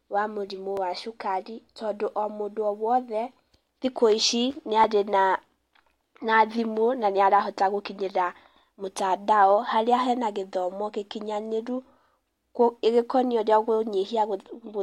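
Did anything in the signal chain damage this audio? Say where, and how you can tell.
Yes, at the driver or buffer stage. There's a repeated buffer at 0.77 s and again at 4.84 s: a tiny click in the speech, each a roughly 2.9 ms chunk played twice with hard joins. That fits a 128-sample buffer replayed once when fresh audio arrived late.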